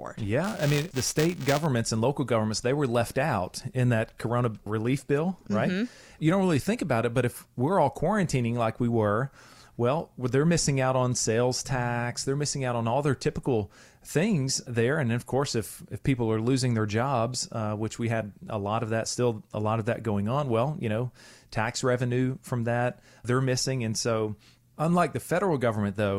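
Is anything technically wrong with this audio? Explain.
Yes. From 0.44 to 1.66 s, just before "and local governments they", there's buffer tearing: the writer and reader collide, splicing in a sliver of audio a few milliseconds stale, giving a 345 Hz robotic buzz that fits a 128-sample buffer.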